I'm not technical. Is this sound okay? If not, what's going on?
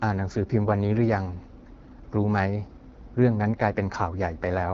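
No. From start to finish, this speech has been through the AMR wideband (HD Voice) codec, the phone-call compression used for HD calls, and at what sounds like one of its lowest settings the damage is plainly audible. The codec rebuilds the voice from a simplified model of the mouth and throat, so at this setting it comes out rough and raspy. Nothing remains above about 7.5 kHz, and the very top is filled with shaped noise instead of real detail.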